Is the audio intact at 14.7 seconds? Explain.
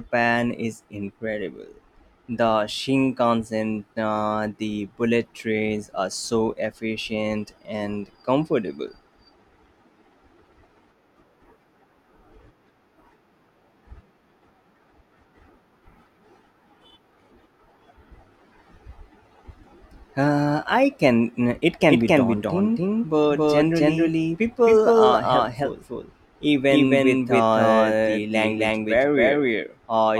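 Yes, the speech at 14.7 seconds plays through intact, with no dropout, click, distortion or other fault audible at that moment.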